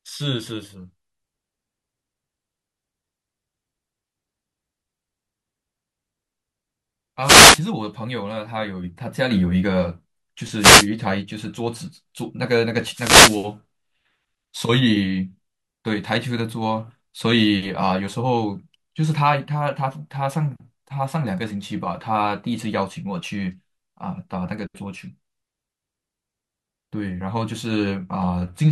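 At 7.22 s a wireless microphone noise hit breaks into the speech. It lasts until 7.61 s. A second follows from 10.57 to 10.88 s. A third, the longest, runs from 12.86 to 13.51 s. Each is a brief swish of static over the voice. The cause is a fade in the analogue FM radio link. Reflected signals cancel the direct one at the receiver. Its hiss then rises and masks the speech until the signal recovers.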